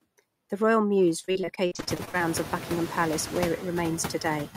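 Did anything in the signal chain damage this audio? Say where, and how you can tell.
Yes. In call processing, noise suppressor artifacts run throughout: room noise is pushed down by about 13 dB, sinking between words and rising under them. This is continuous, unlike dropouts.

In the network stage, repeated packet loss (robotic sound) hits 1.19 to 2.21 s. Holes up to 46 ms are patched by stretching the last sound, which gives choppiness. The real room-noise rise near 2 s doesn't explain it.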